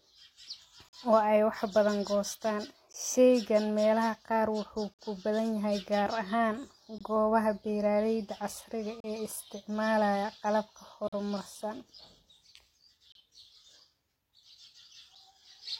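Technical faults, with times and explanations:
0.89, 2.93, 4.94, 6.98, 9.00, 11.08, 13.12 and 15.15 s: gap between stream segments. Hard-edged silences of 7 to 50 ms recur every 2 s, where mismatched segment timestamps leave holes the player fills with silence.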